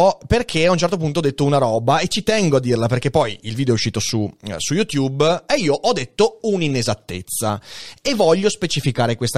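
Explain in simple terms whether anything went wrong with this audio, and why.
Nothing went wrong; the speech sounds as it should.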